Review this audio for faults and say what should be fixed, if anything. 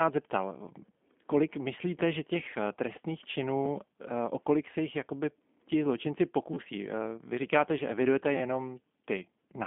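G.729 codec, throughout the clip: the speech has been rebuilt from a vocal tract filter, a pitch predictor and a sparse pulse pattern rather than carried as a waveform, which gives the plainly audible rough, slightly synthetic grain heard here. The line band sits at about 200 Hz to 3.5 kHz, and nothing comes through above 3.6 kHz, which fits an 8 kbit/s G.729A link. To prevent it, carry the call over a wideband codec such as G.722 or Opus.

Repeated buffer, 6.54 to 6.57 s: new audio failed to arrive in time, so the playback device replayed its last block three extra times, with a hard join at each repeat. Each repeat lasts about 11.6 ms, which fits a 512-sample buffer, and the cycle is short enough to come across as a brief buzzy stutter rather than a clear echo. Essentially no audio is lost, only delayed. To prevent it, enlarge the output buffer or give the audio thread higher scheduling priority so that each buffer is filled before its deadline.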